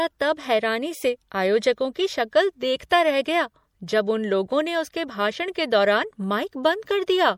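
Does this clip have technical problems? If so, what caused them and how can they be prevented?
Yes. Throughout the speech there is plainly audible damage of the kind typical of MP3 compression, which is likely the cause. The encoder seems to have run short of bits, consistent with a rate around 64 kbps, so weak frequency lines drop in and out between frames, giving a watery, swirling quality and smeared consonant attacks. On a spectrogram the treble stops sharply with nothing above 20.9 kHz, and the upper bands show flickering holes and isolated blobs rather than smooth texture. Prevent this by keeping a lossless master and, where MP3 is required, encoding from it at a much higher bitrate.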